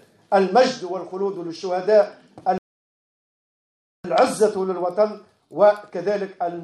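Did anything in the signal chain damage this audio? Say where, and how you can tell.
Yes. At the playback stage, a rebuffering stall: the player's buffer ran dry at 2.58 s and output stopped until more data arrived, resuming at 4.04 s. The sound drops to silence for about 1.46 s, then continues exactly where it paused, with nothing missing but time added.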